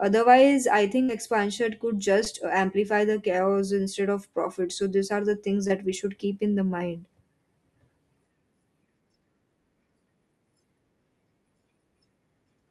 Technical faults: burst of packet loss; short concealed packet loss

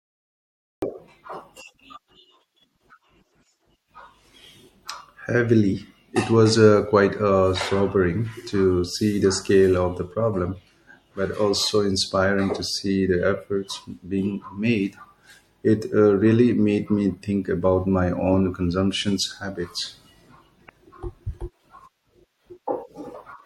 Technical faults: MP3 compression; cut-off start; damaged data in a compressed stream

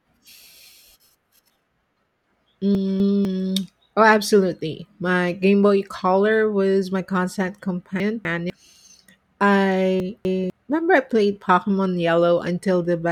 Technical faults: chunks out of order

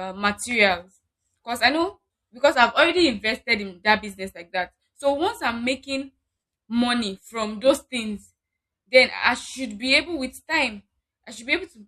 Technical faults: none

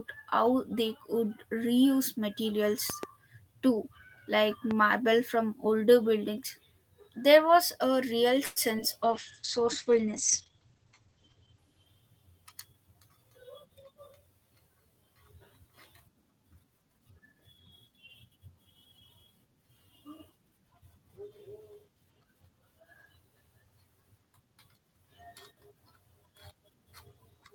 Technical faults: loud pop; call audio freeze; short concealed packet loss; call bitrate drop; jitter buffer speed-up

